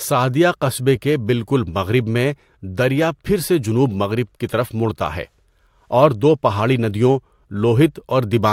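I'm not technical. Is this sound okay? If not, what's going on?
Yes, the recording is technically sound, with nothing in the signal itself that points to a problem.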